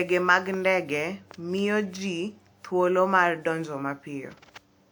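Throughout the speech the sound is swirly, smeared and hollow, and consonant attacks blur. The likely cause is generation loss from around five passes through a WMA codec at a rate that fits 128 kbit/s. A spectrogram shows nothing above 20.1 kHz.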